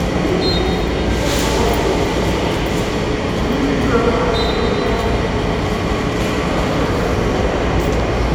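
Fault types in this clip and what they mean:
No faults can be heard anywhere in this audio.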